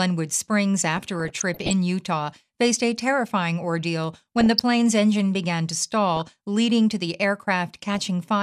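Speech with DAB burbling at 0.97–1.73 s, 4.40–4.59 s after "faced a terrifying ordeal", 6.16–6.34 s after "engine began to", and 7.92–7.99 s. Weak-signal bit errors slip past error correction and corrupt sub-band levels.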